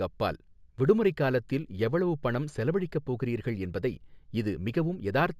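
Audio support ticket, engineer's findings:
Imaging from linear upsampling, throughout: sibilant shimmer, mirrored 8–16 kHz band about 40 dB down, fits a 16 kHz source line-interpolated to 48 kHz; images sit above the band, unlike aliasing.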